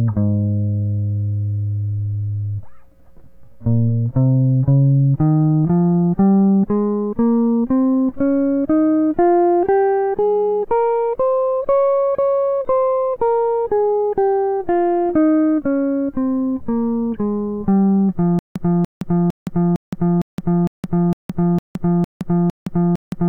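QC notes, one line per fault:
18.39 s to end: stutter with silent gaps. A 0.29 s burst repeats every 0.46 s, likely from a stalled stream. The waveform shows identical blocks between flat 0.17 s gaps.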